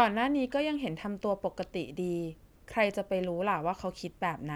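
No technical faults can be heard anywhere in the recording. Nothing breaks up, drops out or changes unexpectedly at any point in the speech.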